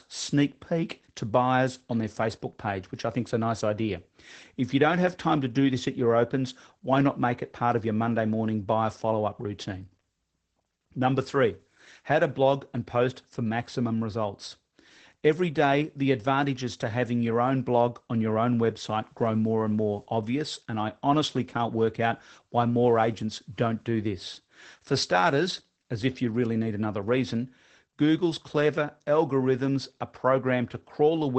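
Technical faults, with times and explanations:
Throughout, Opus voice compression: nothing reaches above 8.7 kHz, and the speech sounds plainly muffled, hoarse and faintly robotic. A linear-prediction coder is rebuilding each short frame from a coarsely coded excitation, which fits a wideband SILK setting near 12 kbps.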